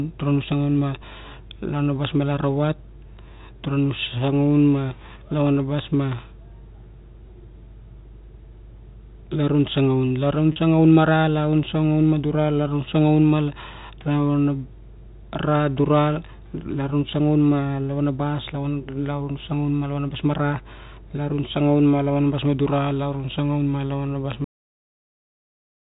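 At 10.52 s, packet loss with pitch repetition leaves a 40 ms gap, which fits two lost 20 ms packets. The receiver bridges it by repeating the last pitch period, so the speech briefly holds on a buzzy sustained tone instead of dropping into silence, as a plain dropout would.

At 24.44 s comes a cut-off end. The final buffers were never played, so the speech stops mid-sound and falls straight to digital silence with no decay or reverberant tail. A natural ending or a deliberate fade would taper off instead. Throughout, the G.711 telephone coding limits the sound to below 4 kHz.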